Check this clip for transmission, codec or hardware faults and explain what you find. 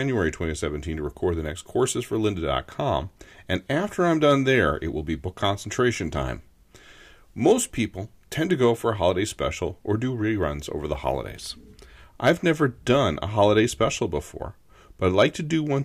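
Hard clipping appears three times in this speech clip, near its end: from 12.26 to 12.30 s with about 5 dB of overdrive, at 13.83 s with about 1 dB, and from 15.06 to 15.22 s with about 4 dB. In each case the peaks exceeded what a stage in the chain could pass and were sliced flat, adding high harmonics. The longer, deeper events crackle on their peaks, as does the brief 13.83 s event.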